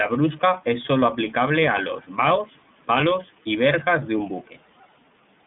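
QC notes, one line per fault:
Throughout, iLBC codec: the speech sits in a narrow telephone band, roughly 150 Hz to 3.6 kHz, so the top end is gone and it sounds boxed-in. The damage is plainly audible as a rough, slightly synthetic grain, and each frame's excitation is coded on its own without help from the previous one. The texture points to the 30 ms frame mode at around 13.33 kbps.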